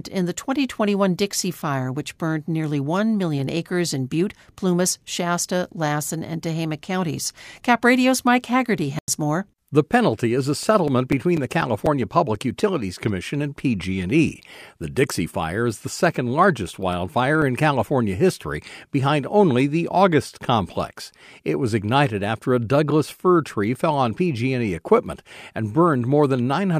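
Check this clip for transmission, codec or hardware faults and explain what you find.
Yes, there are two kinds of fault: a muted corrupt frame and two runs of CD scratch ticks.

From 8.99 to 9.08 s there is a corrupt frame muted. Damaged bits made the decoder reject compressed data, and the player filled the gap with silence. The roughly 96 ms hole fits two frames. The speech cuts off abruptly and resumes on time. On a waveform it shows as a flat gap with sharp edges. On a spectrogram it appears as a full-height blank vertical band.

CD scratch ticks appear from 10.63 to 12.60 s, just after "penalty is a", and again from 16.19 to 17.67 s, between "is the" and "history behind only the". A scratch destroys more data than error correction can rebuild on each turn of the disc, so the player patches or mutes samples. The first run has nine ticks and the second has seven, each at about five per second. 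The longest is around 7 ms in the first run and around 3 ms in the second. They look like thin vertical streaks or brief notches, regularly spaced.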